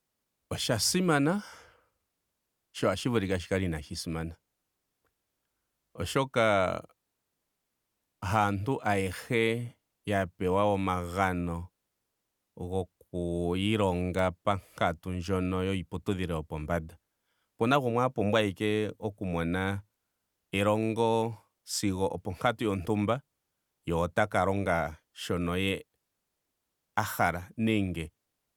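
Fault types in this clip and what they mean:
Electrical switching spike: a single sharp snap at 14.19 s, lasting only a few milliseconds, laid on top of the speech just before "pankatu ndjono yiiputudhilo yopombanda", likely from a nearby switch arcing. Unlike a dropout or digital glitch, nothing underneath is lost or cut.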